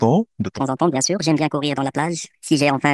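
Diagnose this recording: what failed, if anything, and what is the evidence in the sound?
A wrong sample rate at the playback stage: from 0.6 s to the end, the samples are clocked out faster than they were captured, with no resampling. The speech jumps to 1.45 times its speed and rises about 6.45 semitones, so it sounds high and hurried, with tempo and pitch shifting together by the same ratio. That ratio fits audio recorded near 22 kHz being played out at 32 kHz.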